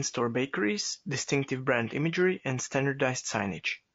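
Throughout the speech the sound is rough and grainy, with noise between harmonics, most likely from low-delay AAC compression (AAC-ELD) at a rate fitting about 32 kbps.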